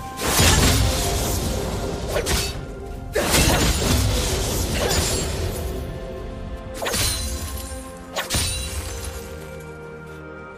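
From 8.76 to 9.56 s, the writer and reader of a ring buffer slip and cross each period, causing buffer tearing: a small slice of roughly 15 ms-old audio spliced in, heard as a 200 Hz robotic buzz.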